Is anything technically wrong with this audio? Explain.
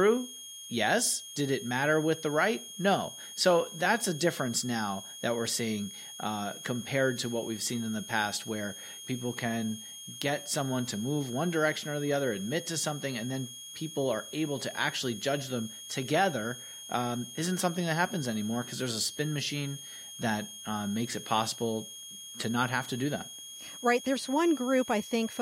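Yes. Throughout the speech, a switching supply whistle is present: a switching power supply is running in an audible burst mode or beating with another one, leaking a high whistle that wanders between 3.25 and 3.29 kHz, sitting only about 15 dB below the speech.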